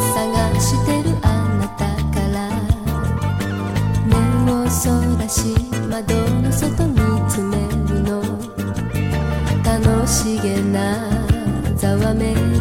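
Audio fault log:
No faults found: the clip is clean throughout.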